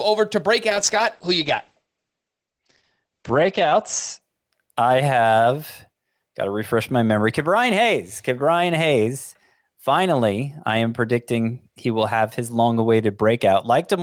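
Sample clock jitter runs through the whole speech clip. An unstable converter clock adds a faint hiss, roughly 40 dB down, that grows on loud, bright sounds.

From 0.71 to 4.27 s, a call bitrate drop strips the band from 20 kHz to 8 kHz for about 3.1 s. The muffled, watery coding fits a fall to about 10 kbps.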